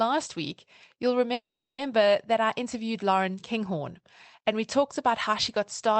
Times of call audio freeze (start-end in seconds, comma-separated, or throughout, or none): 1.33-1.81